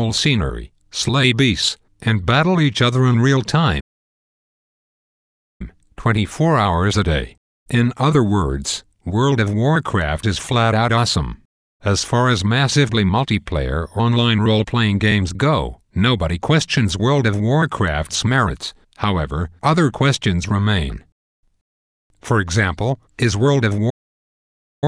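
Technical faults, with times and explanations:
3.80–5.61 s and 23.89–24.84 s, playback stall: speech halts after "each other in real" for 1.8 s, then for 0.92 s before "not simply", likely from the player running dry. The waveform goes flat, and the spectrogram shows empty vertical bands.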